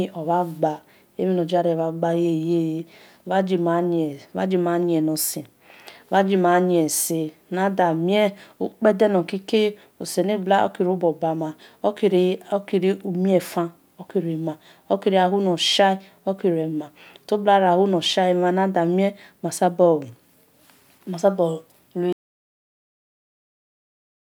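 An audio dropout to silence hits this speech recording at 22.13 s, just after "ma su bor", and runs to the end: the input was likely lost while the recorder kept writing silence, leaving about 2.2 s of total silence with no room tone.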